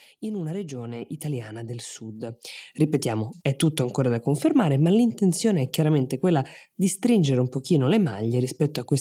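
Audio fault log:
1.02 s and 2.43 s, microphone volume stepped up: the speech and the room behind it jump louder together, by about 4 dB just after "in una", then about 8 dB more after "italiana del sud", because the call software raised the microphone's input volume in single steps.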